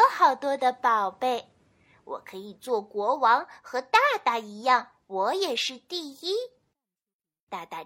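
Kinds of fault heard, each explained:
No technical faults are audible.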